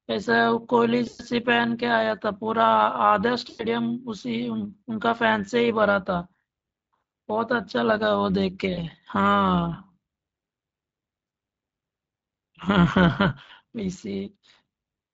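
From start to finish the speech carries overlap-add ripple: the level swells and dips by about 6 dB at a rate around 100 Hz, giving a metallic buzz with extra tones around the voice. Frames were reassembled with an overlap whose windows don't sum to constant gain. Unlike codec hoarseness, which follows the speech, this buzz is strictly periodic and keeps the same rate regardless of what is being said. Beneath it, the Speex coding sounds only lightly coloured.

VoIP packet loss concealed by the speech codec interrupts the speech at 1.07–1.22 s, where about 120 ms is lost, and at 3.49–3.66 s, about 100 ms. Shorter losses follow at 8.73–8.86 s (40 ms), 11.27–11.31 s (40 ms) and 13.43–13.51 s (60 ms). The decoder extrapolated from its last pitch and filter, so each gap is filled with a fading buzzy tone or coloured noise instead of silence. The degradation also lingers briefly after packets resume, which separates it from a clean dropout.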